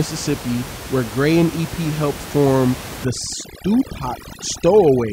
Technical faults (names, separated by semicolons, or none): overdone noise removal